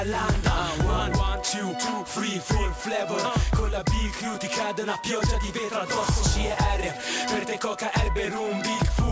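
Aliasing runs through the whole clip. Content above a fold point near 8 kHz has been mirrored back down into the audible band as unrelated tones, leaving sibilant and high-frequency detail gritty and metallic, with energy pressed hard against the top of the spectrum. The folded components sit roughly 15 dB below the wanted sound. This points to a sample-rate reduction from 48 kHz to 16 kHz made without an anti-aliasing low-pass filter.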